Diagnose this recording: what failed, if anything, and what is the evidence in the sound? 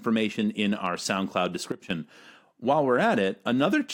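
At 1.72 s the speech and its background noise drop together by about 12 dB in a single step, then return at 1.90 s. This sudden gain jump likely comes from a digital gain setting in the processing chain applied instantly, without a ramp.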